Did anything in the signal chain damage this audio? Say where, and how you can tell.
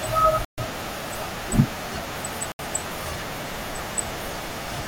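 Yes, two gaps at the playback end, most likely a Bluetooth stall on the wireless link. The speech drops to full silence from 0.45 to 0.58 s (about 131 ms) and again from 2.52 to 2.59 s (about 72 ms), then picks up again. The headphone buffer ran dry while delayed packets were resent. Unlike lost-packet concealment in a call codec, nothing is smeared or filled in. The sound simply halts and restarts.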